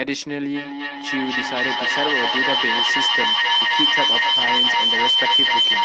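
From 0.54 s to the end of the speech, a feedback howl takes over: two devices on the same call share a room, so the sound circles from loudspeaker to microphone gaining level each pass, and the repeats narrow to a whistle near 3 kHz, coming round roughly every 300 ms, that peaks about 8 dB above the speech. A spectrogram shows a bright horizontal band at 3 kHz, below the 8 kHz ceiling of the call codec.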